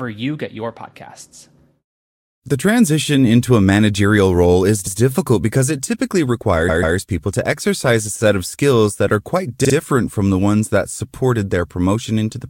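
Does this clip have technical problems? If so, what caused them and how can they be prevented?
Yes. Repeated frames occur at 6.68–6.96 s, after "because it typically," and at 9.64–9.74 s, after "skills that are quite." A 139 ms block and then a 39 ms block each replay twice more. Unlike a dropout, nothing is lost; the same fragment stutters, lengthening the speech. Tracking frame sequence numbers so that each compressed frame is written or sent only once prevents it.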